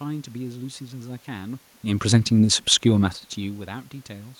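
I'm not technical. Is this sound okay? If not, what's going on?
Yes, no faults here.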